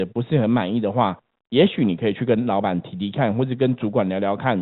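The speech arrives through a G.711 A-law telephone path at 64 kbps, so everything above 4 kHz is absent and only a faint quantisation noise rides along with the signal's level, and nothing in the audio points to a technical fault.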